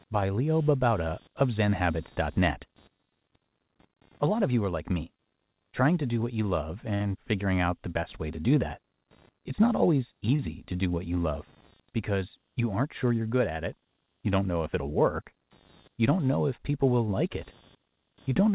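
Speech carried over a call line, with nothing above 4 kHz, which fits a G.711 codec. Computer activity noise runs throughout. It is a faint buzz pulsing at roughly 200 Hz, about 35 dB below the speech. Processor or graphics load shifts the shared audio ground, so the buzz follows the computer, not the voice. There are two short stalls from a late packet. The first runs from 6.94 to 7.02 s, after "do what you love" and before "figuring out the best". The second runs from 10.36 to 10.41 s, after "not always" and before "to do what you". Each time the jitter buffer ran dry. The last sound was held for 59 ms and then 26 ms, with a slight buzz or dip. Then playback resumed where it left off, so nothing is lost, only delayed.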